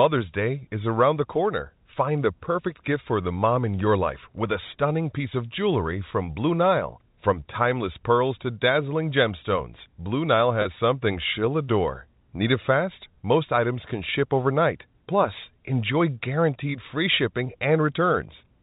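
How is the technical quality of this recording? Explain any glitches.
There's one glitch worth mentioning, on a telephone-band recording that stops at 4 kHz, as you'd expect from G.711 coding. At 10.62 to 10.65 s there's packet loss with pitch repetition. About 30 ms went missing, which fits a single lost packet. The receiver filled the hole by repeating the last pitch period, so you hear a brief held, slightly buzzy blip before the speech carries on.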